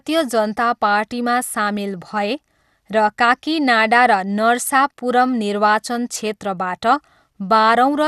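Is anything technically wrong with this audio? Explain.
Yes. Throughout the speech, the sound is dull, with nothing above 12.2 kHz. A gurgling, granular roughness is plainly audible. The likely cause is MP2 compression at a low rate, which fits about 80 kbps. Too few bits shut off upper sub-bands and coarsely quantise the rest.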